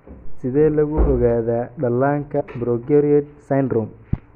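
A short glitch cuts into this speech clip from about 2.39 to 2.42 s, a blip of roughly 23 ms. It is damaged data in a compressed stream: a stretch of the encoded bytes there was corrupted, lost or overwritten, so the decoder misread those frames, lost sync and had to hunt for the next valid frame header. The result of that search is the brief glitch heard at 2.39 s.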